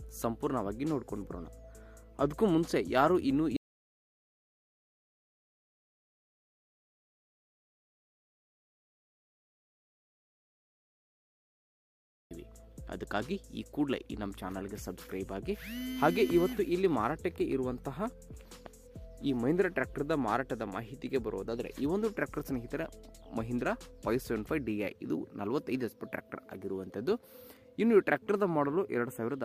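An audio dropout to silence runs from 3.57 s to 12.31 s, cutting the sound off abruptly and bringing it back just as suddenly about 8.74 s later. The gap is silent, with no room tone or noise floor at all, which points to the input signal vanishing while recording carried on writing silence, likely from a disconnected device, a failed link or an accidental mute. Whatever sounded during that stretch is lost.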